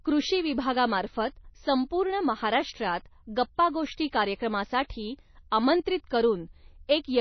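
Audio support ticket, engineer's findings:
MP3 compression, throughout: band-limited speech, no content above 6 kHz, watery swirling artefacts. Likely low-bitrate encoder, consistent with around 24 kbps, cutting treble and toggling weak frequency lines per frame.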